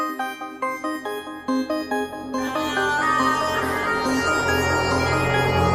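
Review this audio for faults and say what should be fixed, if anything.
No faults detected; nothing needs fixing.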